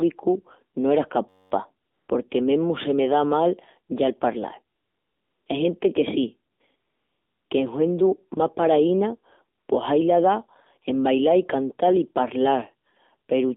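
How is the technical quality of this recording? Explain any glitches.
The speech has been through a low-bitrate AMR narrowband mobile codec and carries one hang-loop burst and several comfort-noise gaps.

Throughout, the AMR narrowband mobile codec (AMR-NB, 7.4 kbps) restricts the sound to roughly 250 Hz to 3.7 kHz. At this bitrate the pulse-driven vocal-tract model leaves the voice plainly buzzy and synthetic, with nothing above about 4 kHz.

From 1.29 to 1.52 s there is a system hang loop: the playback hardware kept recycling one 10.67 ms slice, which fits a 512-sample buffer, 21 times over. The result is a steady buzz at about 94 Hz just before "porque mesmu se me".

AMR comfort noise replaces the real background at 1.86–2.08 s, 4.76–5.46 s (after "ya el palral"), 6.52–6.60 s (after "que sí"), 6.76–7.50 s and 9.58–9.68 s. Here the encoder judged the talker silent and the receiver filled in smooth synthetic noise that switches in and out.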